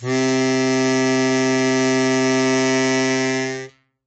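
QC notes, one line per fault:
Throughout: MP3 compression, plainly audible on this music. Nothing survives above 8.3 kHz, and swirly, watery artefacts suggest a low bitrate, likely around 32 kbps.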